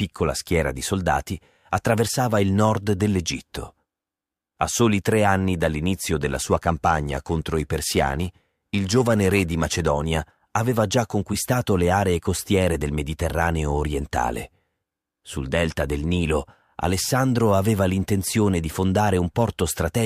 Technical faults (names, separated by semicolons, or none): periodic clock jitter